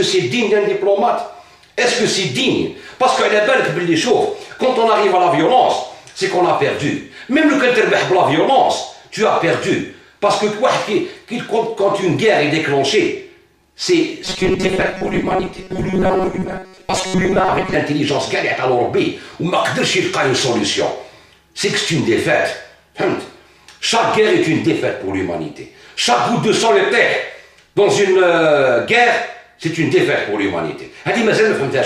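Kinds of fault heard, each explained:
Robotic sound from repeated short buffers: New audio likely stopped arriving in time, so playback kept looping the most recent sliver while the real material was dropped. From 14.25 to 17.74 s most of the sound is replaced by these repeats, and the constant looping stamps a rigid metallic buzz at 188 Hz onto it, which fits a fragment of roughly 5.3 ms being recycled. The underlying sound still shows through only loosely beneath that buzz.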